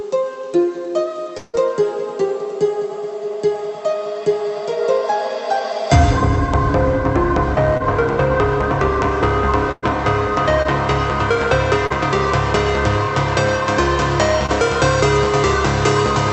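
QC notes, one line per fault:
1.37–1.55 s, long network dropout: The sound stops being fresh and the last sound is drawn out as a buzz or hiss that fades. About 160 ms is filled this way with no silence. The audio then resumes with about 160 ms missing, likely from a network stall.
7.77–7.82 s, 10.62–10.67 s, 11.87–11.92 s, 14.46–14.50 s, short concealed packet loss: Each is a brief smear or wobble. The receiver continued the last sound for 19 to 35 ms, then blended back. Between 20 and 40 ms of real audio is missing at each point.
9.72–9.84 s, burst of packet loss: The receiver continued the last sound for about 108 ms and turned it down as the gap went on, leaving a held buzz or fading hiss and about 10 ms of silence. About 100 ms of the audio is lost before it resumes.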